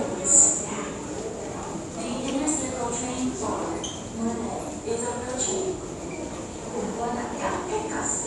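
Dolby Digital compression, likely the cause of the damage heard throughout these everyday sounds, is plainly audible from start to finish. Nothing survives above 11.5 kHz, so the sound is dull and closed-in. The encoder, starved of bits in a way that fits a bitrate around 64 kbps, narrowed the band and left many frequency lines without mantissa data. The decoder filled those gaps with dither noise, giving a rough, fluttering grain around tonal parts.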